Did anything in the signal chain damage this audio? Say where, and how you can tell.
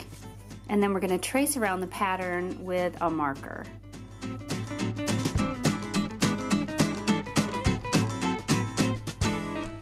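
Yes: a steady low 50 Hz mains hum runs under the whole clip, roughly 20 dB below the signal, pointing to analogue wiring where a ground loop or nearby transformer coupled the power line in.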